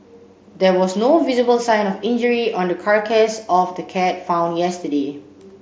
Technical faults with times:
none

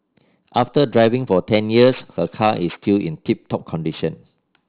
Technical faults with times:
0.00-4.69 aliasing

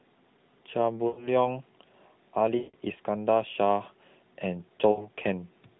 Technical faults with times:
1.08-1.29 lost AMR speech frames
2.58-2.76 lost AMR speech frames
4.92-5.07 lost AMR speech frames

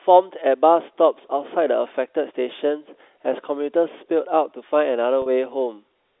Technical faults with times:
5.22-5.26 packet loss with pitch repetition

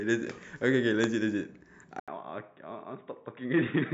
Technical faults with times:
1.04-1.06 loud pop
2.00-3.93 input switched to a poorer device

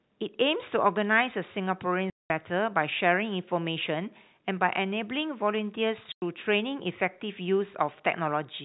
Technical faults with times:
2.10-2.30 packet loss filled with silence
6.12-6.22 packet loss filled with silence

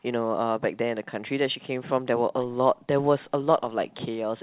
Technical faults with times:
none

